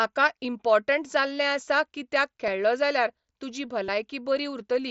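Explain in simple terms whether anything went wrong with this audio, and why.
Some audio packets travelling between the Bluetooth headset and the phone were lost, and the phone filled each gap by repeating a matching bit of the sound just before it. This is concealed Bluetooth headset packet loss. The brief patches at 0.44 s (just before "इम्पोर्टंट जाल्लें आसा कित्याक") and 2.47 s (just after it) are nearly hidden. The longer one, from 3.85 to 3.88 s, can come through as a short buzzy hold before the speech resumes.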